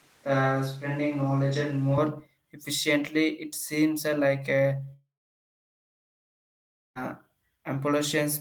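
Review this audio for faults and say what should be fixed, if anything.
From the start of the clip to 1.98 s, the speech sounds roomy and hollow, with thinner bass. This is most likely a switch to a distant microphone, probably a camera or room mic used in place of the close one. The level barely changes, but room noise sits only around 35 dB below the speech. The sound is already in this state when the clip begins and snaps back to close-miked at 1.98 s. To prevent it, monitor the close mic's feed and confirm it is being captured before recording starts.

A long network dropout runs from 4.93 s to 6.97 s, right after "seems uh like a". About 2.02 s of audio is lost. The receiver briefly extends the last sound as a decaying buzz or hiss, then falls to silence for about 1.87 s. Speech resumes at 6.97 s with the missing section gone rather than delayed. The cause is likely a stall in packet delivery long enough that concealment ran out. 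To prevent it, use a more stable network path with enough jitter buffering, or record locally on each end and upload afterward.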